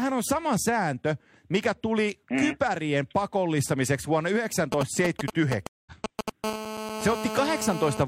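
GSM signalling bursts run from 4.72 to 6.30 s, starting just after "mm kypärien pakollistamiseksi vuonna". A nearby 2G phone sending short groups of radio bursts has its pulses rectified by the audio circuit, producing a galloping dit-dit-dit of brief 217 Hz buzzes, roughly as loud as the speech.

A stream reconnect falls at 5.67 to 5.92 s, inside that burst pattern. The connection dropped, the player went silent for 0.19 s, then reconnected and restarted its decoder mid-stream, so the speech picks up somewhat later than where it stopped, with a skipped fragment.

GSM phone buzz runs from 6.44 to 8.03 s. The phone is now in a call, transmitting steadily 217 times a second, and the rectified pulses become a continuous hard, raspy 217 Hz buzz rich in harmonics, about 7 dB below the speech and unrelated to it.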